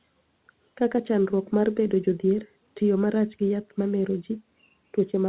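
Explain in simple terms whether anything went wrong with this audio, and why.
Nothing went wrong here; the speech sounds as expected.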